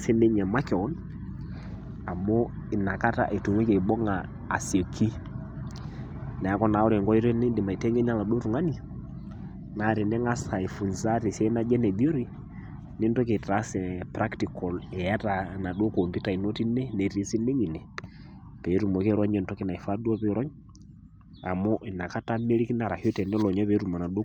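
No technical faults are audible anywhere in the speech recording.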